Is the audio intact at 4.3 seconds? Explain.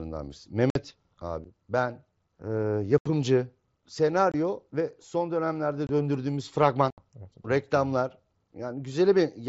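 No. From 4.32 to 4.34 s the speech cuts out for about 22 ms, a brief hole with abrupt edges just before "ve son dönemlerde döndürdüğümüz". This is unconcealed Bluetooth headset packet loss: packets on the mSBC headset link never arrived, and silence or an idle pattern filled the gap.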